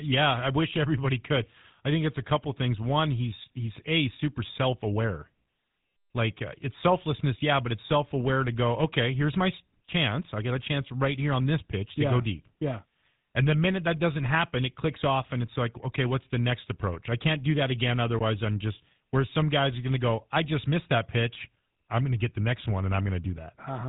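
From start to finish the speech carries GSM full-rate codec damage, and it is plainly audible. The coder rebuilds the voice from a vocal-tract filter driven by a sparse, regularly spaced pulse excitation, so the sound turns buzzy and gravelly, a texture that fits the 13 kbps full-rate GSM coder. On a spectrogram, energy stops at a hard ceiling near 3.9 kHz with empty space above, and the harmonics below look coarse and smeared.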